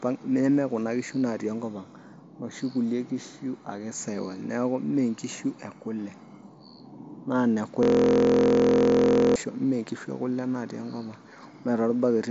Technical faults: system hang loop

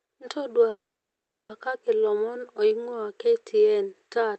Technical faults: call audio freeze

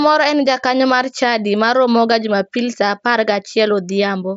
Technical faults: none

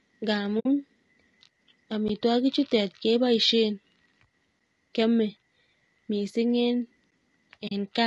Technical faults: low-delay AAC compression; AAC frame loss with muting; gap between chunks

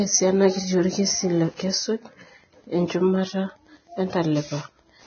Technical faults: Wi-Fi interference; Vorbis compression; pre-echo

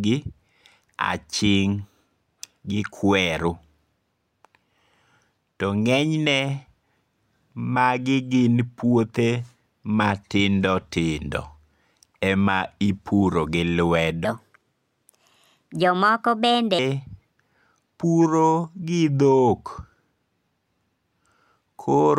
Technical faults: section at the wrong speed

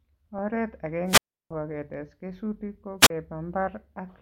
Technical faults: wireless microphone squelch dropout

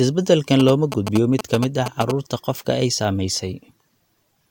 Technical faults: GSM signalling bursts

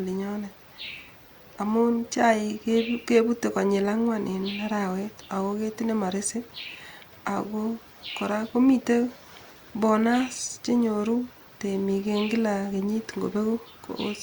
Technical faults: none

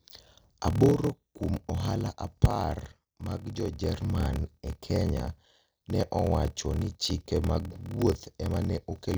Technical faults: block size mismatch (padded); CD scratch ticks

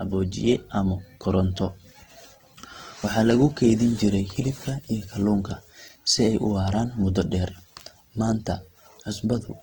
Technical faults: Opus compression

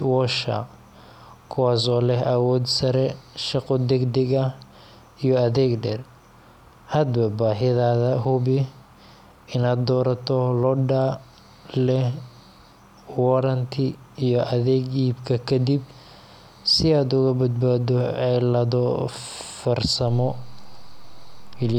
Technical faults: DC step

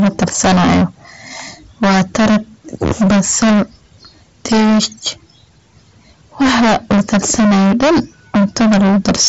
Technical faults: hard clipping

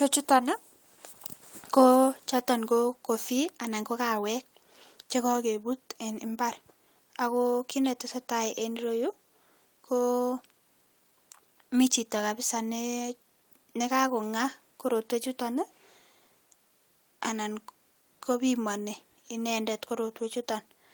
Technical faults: none

